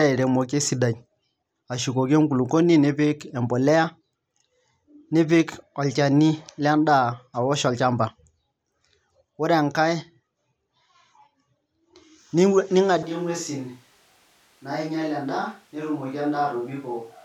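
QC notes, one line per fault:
13.03 s to end, switch to a distant microphone: the voice abruptly turns roomy and hollow, with thinner bass, a level drop of about 10 dB and room noise rising to about 30 dB below the speech, likely because the close microphone dropped out and a farther one took over.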